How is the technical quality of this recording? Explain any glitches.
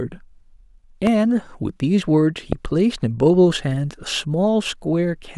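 Two loud pops break into the speech, each a single sharp burst. The loud pops at 1.07–1.09 s and 2.53–2.55 s, peaking about 10 dB and 15 dB above the speech, were likely caused by a voltage spike from a connector, switch or static discharge, which the following circuitry shaped into a brief thump while the speech continued underneath.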